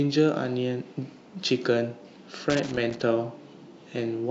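From 2.50 to 3.03 s the speech is broken by loose connector crackle, an irregular scratchy burst from a worn contact making and breaking. The waveform shows jagged dropouts and spikes, and the spectrogram shows scattered broadband vertical streaks across that half-second.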